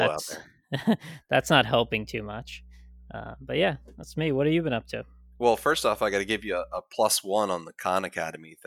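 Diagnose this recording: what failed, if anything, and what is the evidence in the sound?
A steady low drone at 60 Hz, with some weight from its low harmonics, sits under the speech from 1.40 s to 6.78 s, roughly 25 dB below the speech level, then stops. This is mains hum, and it points to the analogue wiring stage. A ground loop between connected equipment, or a transformer close to the cabling, has let the power-line frequency couple into the signal path. The 60 Hz fundamental indicates a 60 Hz supply.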